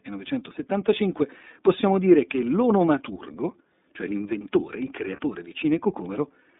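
Throughout the clip, the speech passes through the iLBC codec, and its damage is plainly audible. The band runs from about 200 Hz to 3.7 kHz, so there is no air or sibilant brightness. Each frame's excitation is coded on its own. This gives the voice a rough, slightly synthetic grain. The coarseness points to iLBC's 30 ms frame mode, which fits a rate near 13 kbps.

From 5.16 to 5.19 s, right after "l'onomaturgo cioè l'inventore il", one iLBC frame is lost. That leaves a 30 ms gap. The decoder fills it by repeating the last pitch cycle mixed with noise. It is heard as a brief, held, faintly buzzy vowel. Because iLBC frames stand alone, the voice snaps back at once when the next frame arrives.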